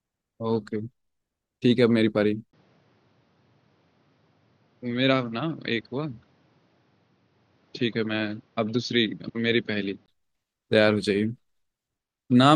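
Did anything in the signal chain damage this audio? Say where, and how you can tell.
Yes: the input likely switched to a poorer device from 2.51 to 10.08 s. A brief 20 ms silence marks the switch. In between, nothing remains above 6.6 kHz, the speech turns duller and roughly 5 dB quieter, and a new noise floor sits about 40 dB down.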